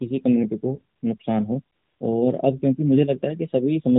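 AMR comfort noise at 0.96 to 1.02 s, 1.18 to 1.20 s and 1.76 to 2.00 s: the phone stopped sending speech frames, and the receiver filled these gaps with smooth synthetic noise.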